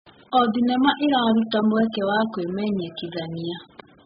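Throughout the speech, nothing survives above 5 kHz, and the sound is dull and smeared, with a warbling, fizzy texture on sibilants. This heavy damage points to AAC compression, likely at about 8 kbps. A plain low-pass filter would dull the audio without that smearing inside the retained band.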